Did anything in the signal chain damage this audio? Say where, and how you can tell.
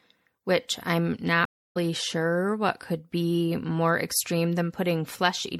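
Yes, two stages. The codec stage is audible across the whole clip as MP3 compression, and it's plain rather than subtle. The speech has that watery, swirly quality: s sounds chirp and flutter as weak frequency lines drop in and out from frame to frame. That's the encoder running short of bits and likely an MP3 encode at a low bitrate, something in the region of 64 kbps.

The network stage shows up as a stream reconnect from 1.45 to 1.77 s. The audio stops dead for about 300 ms, then comes back at a later point in the speech, skipped ahead by roughly a third of a second, so some material is simply gone. That pattern means the connection dropped, the player went quiet, reconnected and spun up a fresh decoder mid-stream on a live feed rather than resuming where it left off.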